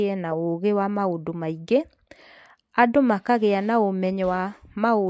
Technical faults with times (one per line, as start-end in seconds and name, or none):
none